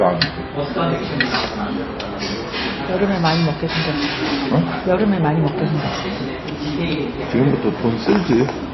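From start to finish the audio carries clear damage from what is likely MP3 compression. Nothing gets through above 5.8 kHz, so the top end is simply gone and everything sounds dull and boxed in. With bits this scarce, fitting something around 24 kbps, the encoder keeps dropping weak frequency lines in and out between frames, which gives that watery, swirly texture, brittle metallic chirps on any hissy detail, and smeared, softened attacks.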